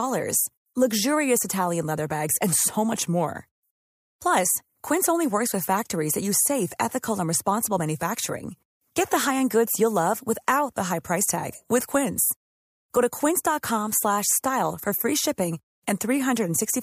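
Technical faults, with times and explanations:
No technical faults detected.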